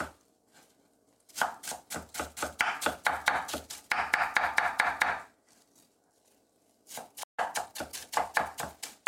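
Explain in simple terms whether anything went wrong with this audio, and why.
Something did go wrong. The player most likely ran short of incoming data, or its processing was briefly held up, so it had nothing to send out. This is a playback stall. At 7.23 s the sound simply cuts out in mid-flow, leaving about 150 ms of silence. After the gap the sound picks up again where it left off, so nothing is skipped. The gap is an interruption.

Having fallen behind, the player then had to make up the lost time. It did this by quietly snipping out tiny slices of the audio and blending the edges together, which is time-compressed catch-up. From 7.40 s to 8.40 s the sound runs about 1.15 times faster than normal but keeps its usual pitch. It comes across as slightly hurried.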